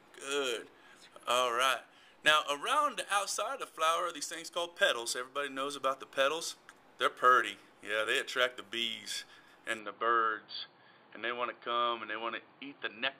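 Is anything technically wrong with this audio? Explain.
Yes. From 9.79 s to the end, the input likely switched to a poorer device. The sound abruptly loses everything above about 4.6 kHz and turns dull and boxy, with no gap at the changeover and no obvious jump in loudness. A faint new background noise, well below the main signal, also appears. A lower-grade microphone or a headset's call profile would bring this restricted bandwidth and its own noise floor.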